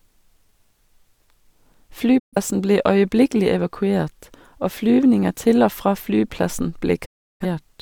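At 2.18 s, a digital broadcast dropout mutes the speech for about 0.2 s just before "ble øyeblikkelig". It happens again at 7.04 s, lasting about 0.4 s after "til og fra flyplassen". The receiver lost valid frames and silenced its output. Each gap begins with a 20 ms fade and shows as a blank column on the spectrogram and a flat waveform.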